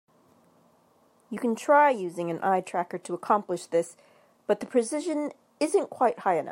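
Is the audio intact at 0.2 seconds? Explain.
Yes, the speech at 0.2 seconds is intact, with no dropout, click, distortion or other fault at that moment.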